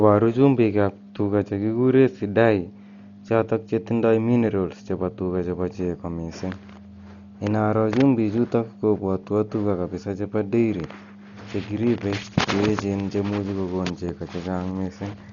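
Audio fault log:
Throughout: likely Dolby Digital compression; speech is dull, nothing above 7.1 kHz, heavy roughness as bit-starved frequency lines get noise fill, fitting about 40 kbps.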